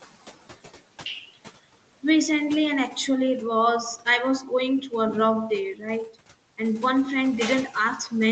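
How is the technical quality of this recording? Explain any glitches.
The recording has one fault running the whole way through: noise suppressor artifacts, on speech that tops out around 8 kHz, which fits a wideband call path, over room noise sitting about 18 dB below the voice.

For the full 8 seconds, the suppressor works frame by frame, pulling down whatever bands it judges to be steady noise by about 15 dB. So the background drops away in the gaps between words and creeps back up underneath them.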